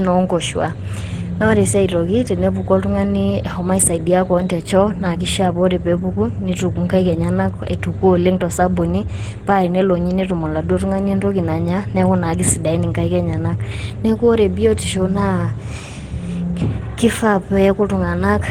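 Throughout the speech, the sound is hoarse and muffled in the body of the voice, with a grainy, noisy roughness that is plainly audible, while content still reaches up to about 20.2 kHz. This is likely Opus compression at a low bitrate, consistent with roughly 16 kbps, running in its hybrid mode: the lower band is coded as speech, which gives the hoarseness, and the upper band is rebuilt from band energies filled with noise.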